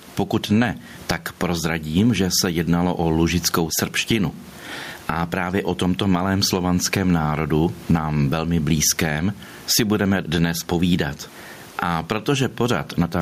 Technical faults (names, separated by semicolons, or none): gain pumping